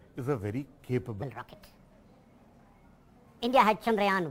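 From 1.22 s to the end, the audio plays back as a section at the wrong speed, running 1.44 times faster than the material before it. Pitch rises by about seven semitones at the same instant the pace quickens, so everything sounds higher and hurried together. The likely cause is a clock mismatch during editing or playback. A pitch shifter would raise the pitch with the timing unchanged, and a time-stretch would alter the pace with the pitch unchanged.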